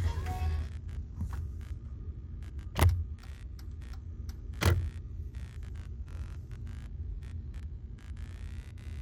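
Computer activity noise runs through the whole clip, a buzzing, chirping pulse at around 70 times a second, roughly 25 dB below the sounds. Changing load on the computer shifts the audio circuit's shared ground, so the noise follows the machine's activity rather than the recorded sounds.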